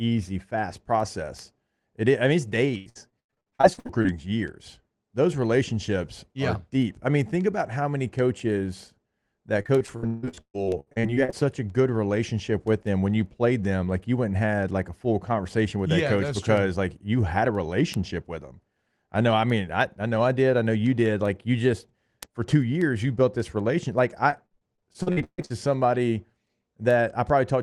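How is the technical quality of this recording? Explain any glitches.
The recording is marred by three bursts of repeated packet loss (robotic sound), at 2.77–4.06 s, 9.62–11.34 s and 24.30–25.52 s. In each stretch the call's packets kept arriving late or not at all, and the receiver patched every hole by extending the last bit of speech it had. With about 40 to 43 percent of each stretch filled in this way, and single gaps of up to 93, 159 and 139 ms, the speech turns choppy, with syllables clipped away. The call path itself sounds like a low-bitrate call codec whose top end stops near 12 kHz.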